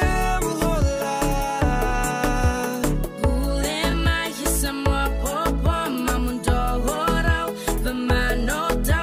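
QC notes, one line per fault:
1.89–1.91 s, 3.91–3.93 s, 5.93–5.95 s and 7.95–7.97 s, overlapping chunks: a click or stutter recurs almost exactly every 2 seconds, where a 20 ms slice of audio plays twice in a row. The sound was handled in 2-second blocks, and each new block begins 20 ms before the previous one finished, so that stretch repeats at every join. The fixed block length makes the glitch fall at regular intervals.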